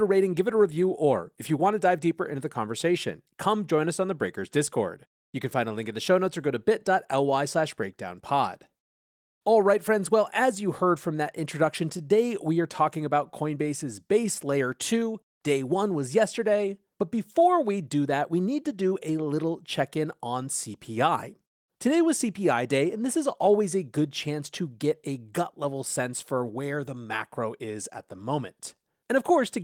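Clock drift between sender and receiver runs through the whole clip. The sender's clock runs roughly 1.5 percent slow against the receiver's, so the jitter buffer keeps draining and playback has to keep stretching short gaps to avoid running dry.

Repeated timing corrections follow from that, from 0.28 s to 28.76 s. The receiver keeps repeating short pieces of the speech, always lengthening rather than cutting, at uneven spacing, adding about half a second overall. The delivery plays at 98 percent speed, heard as faint hiccups and a slightly dragging, unsteady tempo.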